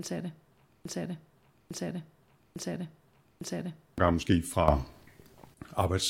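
Starting at 0.85 s, the speech locks into a broken-record loop: a fragment about 0.85 s long plays four times back to back, exactly the same each pass, until 3.98 s. The likely culprit is a player or stream stalling and re-sending the last chunk it held. Whatever speech should have filled those three seconds is gone, so the loop plays in place of that speech.

Then at 4.68 s there's a sudden gain jump. The level leaps by about 10 dB in a single step, with the background noise rising right along with the speech, and it stays up until 5.54 s. That pattern likely comes from a digital gain setting or bit shift applied instantly instead of being ramped in.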